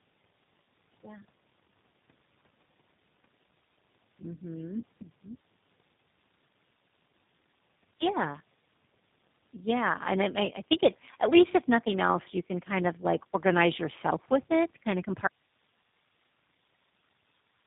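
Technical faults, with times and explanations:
throughout: Tandem speech coding. The speech passes through two low-rate speech coders in a row, with a plain telephone-rate stage between them. Each coder rebuilds the previous one's flawed output, so the flaws add up. The sound is rough, muffled and warbly, worse than one coder alone. Nothing is left above 3.8 kHz. The character fits a GSM full-rate coder followed by a G.729A-type coder at around 8 kbit/s.
15.28 s to end: Audio dropout to a faint residue. The speech cuts off abruptly and never returns. This is a hard break, not a pause or a fade. Only hiss remains, roughly 50 dB below the speech level. The wanted signal has likely been lost upstream while the rest of the path stayed open, so its own background noise carries on. The clip runs out before anything comes back.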